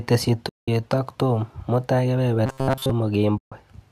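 It's a speech clip with two kinds of trouble. First, AAC frame loss with muting: at 0.49 to 0.68 s and again at 3.38 to 3.52 s the sound drops into soft-edged holes, about 190 ms and 140 ms long. That fits the decoder zeroing out lost frames, roughly 19 and 14 frames of about 10 ms each, while the overlapping windows fade the audio down and back up at the edges. Underneath, the coding is likely low-delay AAC (AAC-ELD) at 64 kbps, with only light damage. Second, from 2.46 to 2.92 s there's robotic sound from repeated short buffers. The voice goes stiff and metallic, with a fixed buzz at 133 Hz that still loosely tracks the speech. The likely cause is a starved playback buffer looping its last chunk of roughly 7.5 ms, the length that gives a 133 Hz buzz, while most of the real audio in that stretch is skipped.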